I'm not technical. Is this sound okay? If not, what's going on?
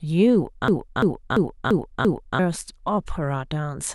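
No. From 0.68 to 2.39 s there's a system hang loop: the computer briefly froze while the sound hardware kept replaying the same third-of-a-second chunk of speech, five times, a choppy stutter about three times a second. About a second and a half of real audio was lost.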